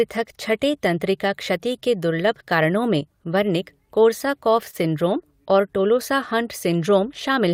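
Right after "कारणों में वर्निक कोर्साकॉफ", from 4.70 to 4.75 s, there is short concealed packet loss. About 20 ms of audio arrived too late, and the decoder extended the preceding sound for about 23 ms, which is heard as a brief smear. Overlapping its tail, from 4.73 to 4.75 s, a lost packet was rebuilt from error correction. The 20 ms frame came from the low-bitrate copy carried in the following packet, so it sounds rougher and noisier.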